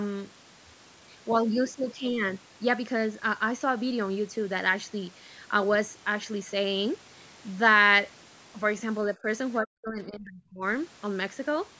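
At 9.14 to 9.28 s the speech dips shallowly, then at 9.6 to 10.64 s almost vanishes, likely speech suppressed in double talk: gain ducking, not abrupt packet-loss gaps.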